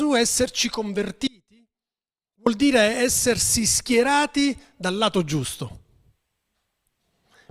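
At 1.27 s the speech cuts off abruptly, and for about 1.19 s, until 2.46 s, only a faint leak of it remains, roughly 30 dB below its normal level, before it snaps back mid-flow. This is an audio dropout to a faint residue. The hard edges at both ends set it apart from a natural pause or a fade. The likely cause is that the wanted signal was briefly lost while the path after the break stayed live.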